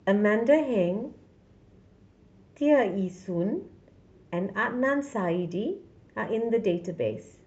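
No technical faults are audible.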